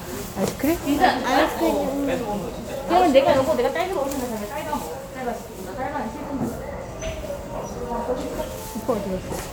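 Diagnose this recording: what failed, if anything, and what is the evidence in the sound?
Nothing failed: every stage from capture through playback checks out, and the sound carries no audible defect to trace.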